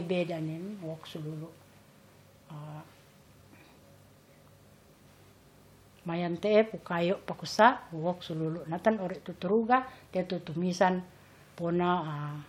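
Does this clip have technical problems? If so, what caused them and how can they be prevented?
No, no technical problems here.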